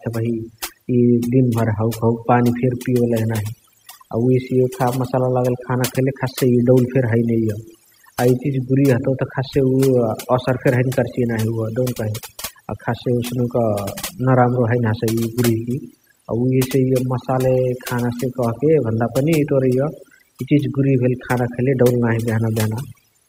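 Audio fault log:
Throughout, overdone noise removal: the noise reduction was set too aggressively for this noisy speech recording, so any frequency band sitting close to the estimated noise level gets pulled right down or gated off. Low-level parts of the speech fall below that threshold and vanish along with the noise. The pauses drop away and break up into twinkling, chirpy specks.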